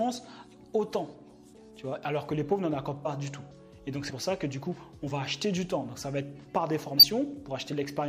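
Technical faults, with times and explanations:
1.56, 3.04, 4.09–4.11, 5.04–5.08 and 6.97–7.04 s, compressed frames skipped: the sound jumps ahead, skipping roughly 20 to 100 ms each time because whole frames were dropped.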